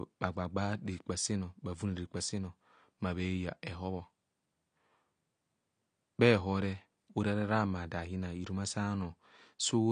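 Throughout the speech, the audio was likely passed through AAC compression at a low bitrate, fitting about 32 kbps AAC-LC. The encoder drops everything above 9.7 kHz and coarsely quantises the rest, leaving the voice dull and smeared, with fizzy, warbling sibilants.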